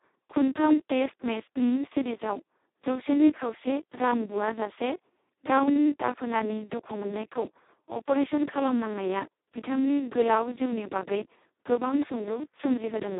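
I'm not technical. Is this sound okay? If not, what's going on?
No. Across the whole clip, the speech was squeezed through the Speex codec at a very low quality setting. That leaves too little detail to rebuild the voice, so it sounds hoarse, buzzy and robotic, and like an old phone line, with nothing above 3.8 kHz.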